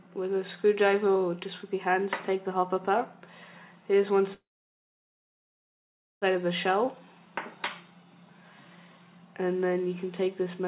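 At 4.34 s the audio stops moving forward. A short fading tail follows, then about 1.78 s of silence. Sound resumes at 6.25 s, picking up exactly where it left off. Nothing is lost, but everything after this point runs about 1.9 s late. This is a call audio freeze. Packets were likely held up in the network, and the jitter buffer ran dry. The receiver stretched the last sound briefly, then went quiet until data arrived.

From 6.86 s to 7.26 s comes a jitter buffer slow-down. The buffer is rebuilding its reserve. It repeats single pitch periods and slivers of pause, adding about 44 ms. That stretch plays at roughly 90% speed. The pitch holds steady, but sounds are drawn out slightly. Throughout, nothing reaches above 4 kHz, as expected from the narrowband G.711 call path.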